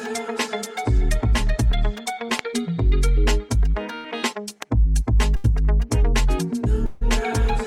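A voltage spike entering the signal chain, likely from a switch, static or a driver glitch, produces two loud pops, single sharp clicks at 2.39 s and 4.62 s, each peaking roughly 15 dB above the surrounding audio while the sound carries on beneath them. Two bursts of packet loss follow. At 3.95 to 4.06 s and again at 5.36 to 5.46 s, runs of packets failed to arrive in time. The receiver stretched the last sound over the gap for about 88 ms and then 78 ms as a fading buzz or hiss, and each time about 80 ms of audio is skipped when playback resumes. A longer network dropout, likely a stall in delivery, occurs from 6.86 to 7.03 s. About 150 ms of concealment fades without ever reaching silence, and about 160 ms of the audio is lost before it picks up again.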